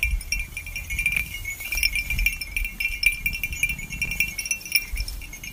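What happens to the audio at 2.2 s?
Nothing goes wrong at 2.2 s; the sound carries on intact through that moment with no dropout, click or distortion.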